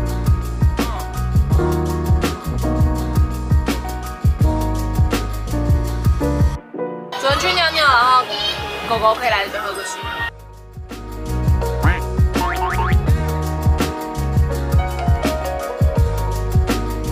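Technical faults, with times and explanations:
No technical faults can be heard; the signal stays continuous, with nothing in it pointing to a problem in the recording or transmission chain.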